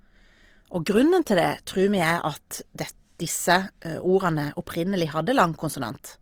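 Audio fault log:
throughout Opus compression: the speech has been squeezed through a low-rate transform codec, likely Opus in its CELT music mode at a rate near 24 kbps. Short of bits, it fills bands with folded or noise-like content, so the speech sounds grainy and rough, even though content reaches 20.4 kHz.
1.25 s pre-echo: the codec's quantisation noise, sized for a sharp attack falling late in its block, spread back over the quiet moment before it. About 12 ms of hiss leads the onset, and the attack itself sounds softened and smeared.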